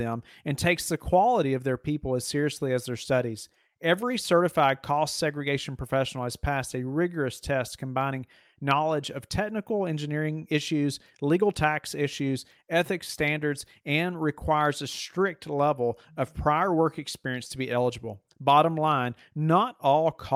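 Clock drift between sender and receiver runs through the whole speech recording: the sender's clock is about four percent fast, so the jitter buffer keeps overfilling. On a waveform, the signal shows small splice points at irregular spacing rather than any single break.

Repeated timing corrections run from 0.05 s to 20.33 s. To shed the excess, the receiver keeps cutting short pieces, giving an effective speed of 104%. These sound like faint hiccups and a slightly hurried, uneven tempo. A spectrogram shows tiny vertical seams with abruptly truncated harmonics.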